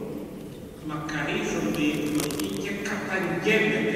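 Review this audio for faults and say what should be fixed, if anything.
Cable scratch noise from 1.94 to 2.57 s: dense, uneven rustling about 10 dB below the sound, likely from a worn cable or connector being moved. Replace worn leads and secure cables so they cannot shift during recording.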